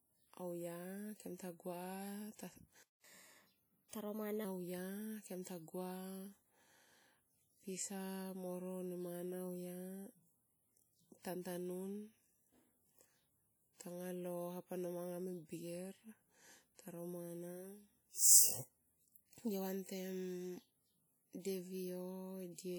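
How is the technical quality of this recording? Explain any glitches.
The technical quality is compromised: the speech carries plainly audible codec damage throughout, and a brief dropout is followed by a rushed, raised-pitch passage.

From start to finish the audio sounds ringing and washy, with a hiss that swells and fades along with the voice. This likely comes from WMA compression, a transform codec whose quantisation noise smears over long blocks; the damage fits a low encode around 48 kbps.

At 2.83 s the sound cuts out to silence for about 0.21 s, resuming at 3.04 s. This is likely a playback stall: the player briefly had no data to output, or its thread was held up, so output stopped mid-flow until it recovered.

From 3.04 s to 4.45 s the speech runs fast and high, at 1.15 times normal speed and about two semitones up. This is catch-up at higher speed: the player resampled its backlog to regain the time lost during the stall, then returned to normal.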